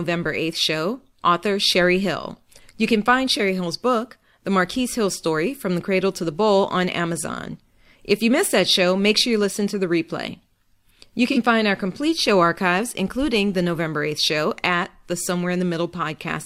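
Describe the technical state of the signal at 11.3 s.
AAC frame loss with concealment occurs at 11.32 to 11.38 s, just before "find our complete show". The gap of about 43 ms points to a single lost AAC frame. The decoder had nothing to play for that stretch, so it rebuilt the missing spectrum from the last good frame, using scrambled signs or interpolated energy instead of the real content. Because the loss is this short, it never fades toward silence and instead comes through as a brief smeared, noisy or phasey patch in the sound.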